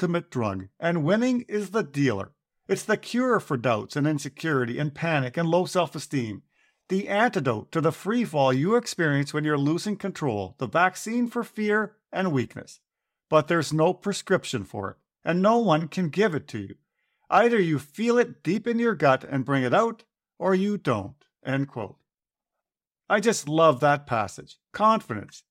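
No technical faults are audible in this recording.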